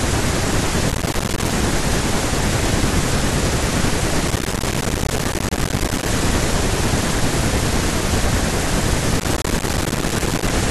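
Speech here is broken up by processor overload crackle in three bursts, from 0.90 to 1.50 s, 4.28 to 6.08 s and 9.20 to 10.52 s. Buffers of around 5 ms keep missing their deadline and dropping to silence, so the gritty tearing rides over the speech and stops when the load eases. Regular packet loss would leave fewer, longer gaps instead.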